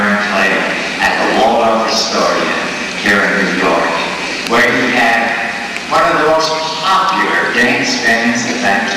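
Hard clipping runs through the whole clip. The signal is driven about 10 dB past its limit. Around one sample in twenty is cut flat, adding harsh fuzz on loud peaks.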